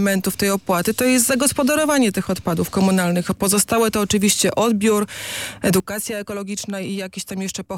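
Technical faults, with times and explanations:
5.8 s to the end, sudden gain jump. At 5.8 s the whole signal drops by about 9 dB in one step. There is no fade. The background noise falls by the same amount at the same instant, so the change sits on the entire signal, not on the source alone. The level then stays low to the end. The likely cause is a digital gain setting applied between two samples with no ramp.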